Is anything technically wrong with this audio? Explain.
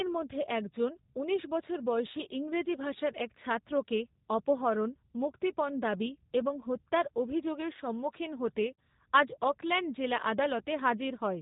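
Yes, two faults. Throughout, the speech shows plainly audible G.729 codec damage: nothing above 4 kHz, with a rough, synthetic texture. The coder rebuilds the voice from a vocal tract filter, a pitch predictor and sparse pulses, and the sound points to the 8 kbit/s G.729A variant. Plain low-pass filtering would lose the treble but keep the voice's natural texture.

At 8.76 s there is VoIP packet loss concealed by the speech codec. About 30 ms of audio, which fits a single lost packet, was replaced by the decoder extending its last pitch and filter. That gap becomes a brief, fading buzzy tone or coloured noise, and the voice stays weak or distorted for tens of milliseconds afterwards. A plain dropout would leave silence or a click instead.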